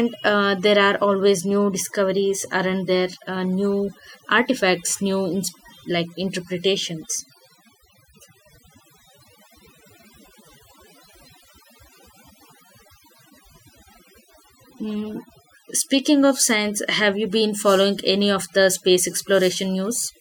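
Overdone noise removal runs through the whole clip, from start to finish. A noise reduction stage was pushed too hard on a noisy recording, so any frequency band sitting close to its noise estimate gets cut far down or switched off, and the quieter parts of the speech are cut along with the noise. Between phrases the background drops to near silence flecked with twinkling specks.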